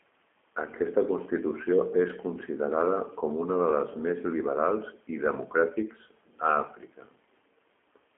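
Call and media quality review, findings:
G.729 codec damage throughout, plainly audible. Rough, synthetic speech, band-limited to about 250 Hz–3.4 kHz. Fits 8 kbit/s G.729A rebuilding speech from filter, pitch predictor and sparse pulses.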